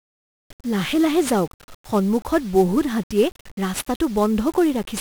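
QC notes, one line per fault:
Throughout, 1-bit DFPWM compression: the speech is fuzzy and crackly under heavy broadband noise, with the treble buried in hiss. Each sample keeps only one bit, nudging an adaptive level up or down, so coarse quantisation noise results, consistent with roughly 48 kbps.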